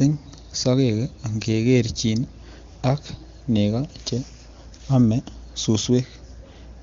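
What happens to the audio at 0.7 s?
Nothing goes wrong at 0.7 s: the speech carries on intact through that moment, with the AMR wideband (HD Voice) coding sounding clear at a rate that fits about 23.85 kbit/s.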